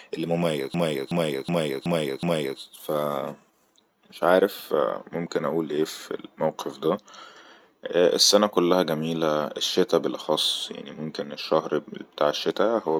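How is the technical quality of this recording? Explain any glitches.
The recording has one clear glitch, a system hang loop from 0.74 to 2.60 s. For that stretch the computer or audio driver seems to have stalled while the sound hardware kept replaying its ring buffer, so one 0.37 s slice of speech repeats exactly, five times, at about 2.7 Hz. That loop length fits a 16384-sample buffer. It comes across like a skipping record rather than a buzz. Afterward the speech picks up with little or nothing missing.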